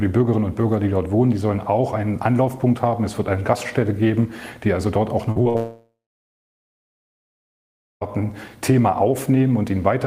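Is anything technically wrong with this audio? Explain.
Yes. At 5.31–5.37 s and again at 5.43–5.47 s, short concealed packet loss: the receiver extended the preceding sound across 40 ms and then 16 ms gaps. Each is a brief smear rather than an audible hole.

At 5.49–5.56 s a burst of packet loss follows. About 60 ms went missing, and the concealment holds the last sound as a fading buzz or hiss, longer than the smears.

From 5.56 s to 8.09 s, a long network dropout is the likely cause. Concealment fades out, leaving about 2 s of silence, and the audio resumes with roughly 2.4 s lost.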